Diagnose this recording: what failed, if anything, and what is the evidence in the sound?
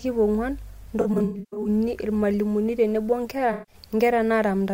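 The fault is at the codec stage: AAC frame loss with concealment, twice in this speech. From 1.01 to 1.68 s, about 360 ms of audio is missing in scattered gaps, the longest roughly 150 ms, heard as smeared, noisy patches. From 3.52 to 3.75 s, about 150 ms is lost and sounds phasey. The decoder rebuilt each gap from the last good spectrum with scrambled phase, so a spectrogram shows frozen, blurred bands instead of moving formants, and the waveform loses its transients.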